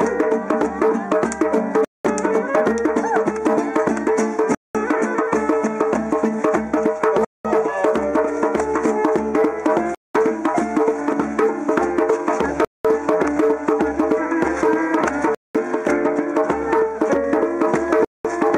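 At 1.85, 4.55, 7.25, 9.95, 12.65, 15.35 and 18.05 s the sound drops out for 200 ms each time. This is a gap between chunks: blocks of 2.5 s of audio play back with silence inserted at every join, so a hole recurs every 2.7 s while nothing is actually cut. On a waveform each gap is a flat, empty segment with abrupt edges. On a spectrogram it is a clean vertical blank band.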